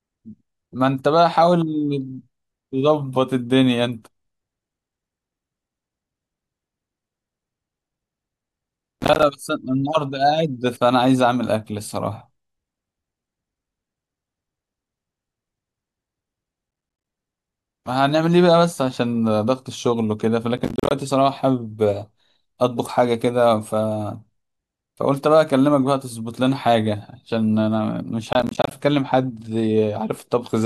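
Processor overload crackle appears four times in the speech: 9.00 to 9.23 s, 16.71 to 17.06 s, 20.58 to 20.91 s, and 28.33 to 28.71 s. In each burst the processor keeps missing buffer deadlines, and every miss drops in a hard-edged slice of silence. The rapid chopping, which fits buffers of around 10 ms, sounds like gritty crackle tearing through the sound. Each burst stops abruptly once the load clears.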